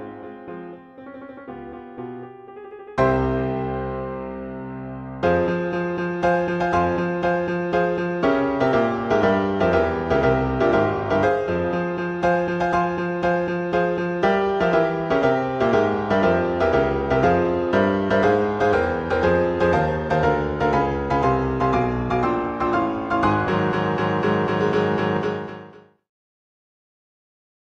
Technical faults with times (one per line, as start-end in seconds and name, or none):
none